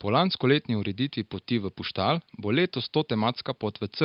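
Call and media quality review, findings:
No call or media quality findings for this speech clip; the quiet room noise sits about 51 dB below the speech.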